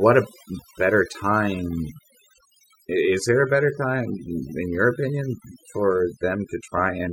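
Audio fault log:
Throughout, overdone noise removal: the noise reduction was pushed too hard, so individual frequency bands near its noise estimate are pulled far down or cut, taking quiet parts of the speech with them. Unlike plain low-pass dulling, the gaps between phrases fall to near silence with twinkling specks.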